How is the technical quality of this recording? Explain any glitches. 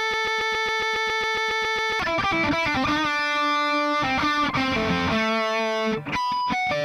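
A broken-record loop spoils the start. From the opening until about 2.0 s, a fragment of about 0.14 s repeats exactly, back to back, some 14 times, already under way when the clip begins. The likely cause is a stalled player, encoder or stream resending its last buffered fragment, so the audio meant for those two seconds is lost.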